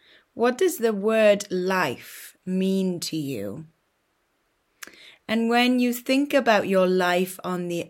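No technical faults can be heard anywhere in this clip. Nothing in the audio stands out as a problem at any point.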